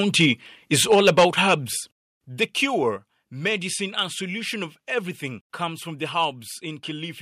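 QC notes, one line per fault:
0.20–0.31 s and 0.80–1.54 s, microphone overload: The loudest peaks turn harsh and crackly, with their tops sheared flat. The signal overshoots full scale by about 3 dB in the first burst and about 6 dB in the second. A few percent of samples are clipped. The likely cause is input gain set too hot for the converter.
0.94 s and 2.97 s, microphone volume stepped down: Voice and background drop together, abruptly, by about 2 dB each time. The first drop lands inside the distorted stretch. The second comes just before "medicine and solution of". Call software likely cut the device's input volume in a single step.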